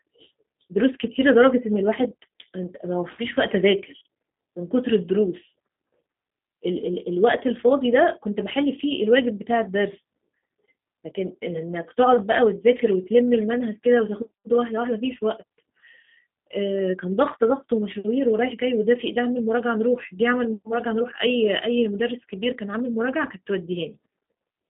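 Speech carrying G.729 codec damage from start to finish: the sound sits in a telephone band of about 200 Hz to 3.7 kHz with nothing above 3.8 kHz, and has a rough, synthetic buzz from pulse-coded excitation, which fits an 8 kbit/s G.729A stream. Plain band-limiting would narrow the sound without that roughness.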